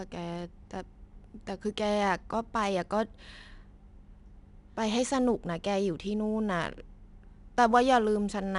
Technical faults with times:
0.00-8.58 4-bit ADPCM compression

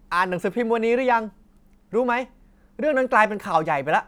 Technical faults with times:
none

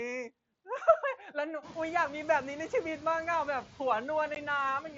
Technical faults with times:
0.00-4.98 noise suppressor artifacts
4.35 unconcealed Bluetooth headset packet loss

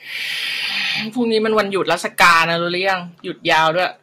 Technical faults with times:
1.58-2.94 hard clipping
3.50-3.85 hard clipping

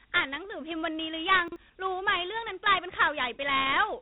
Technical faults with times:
0.00-4.01 4-bit ADPCM compression
1.48-1.56 chunks out of order

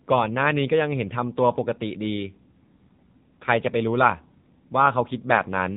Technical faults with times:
0.00-5.77 AMR narrowband mobile codec

